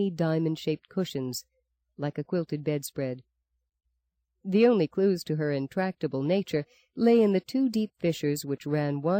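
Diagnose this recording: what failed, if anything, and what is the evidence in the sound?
Nothing stood out on listening that would point to a failure at any stage of the chain.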